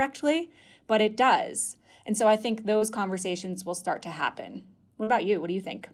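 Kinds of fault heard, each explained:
Short concealed packet loss: twice in this speech, near 2.77 to 2.83 s and 5.03 to 5.09 s, about 40 ms of audio failed to arrive and the decoder synthesised roughly 37 ms to bridge each gap, extending the preceding sound before crossfading into real signal. Each heard as a momentary smear or wobble. On a spectrogram the harmonics or noise band stretch flat across the gap; where the sound was voiced, the waveform shows a repeated cycle pattern there.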